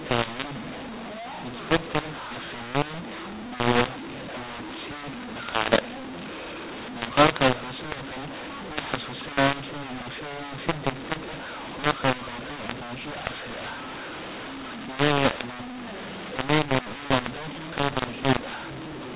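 From start to finish the speech shows a mu-law and A-law mix-up: the telephone audio was written with A-law but read back as mu-law. The two logarithmic curves don't match, so sample levels are scrambled, some exaggerated and others squashed, and the quietest values are pushed well above silence. The result is harsh, gritty distortion over every phrase and a noisy floor filling the pauses. The narrow band, with nothing above 4 kHz, fits a standard G.711 telephone path.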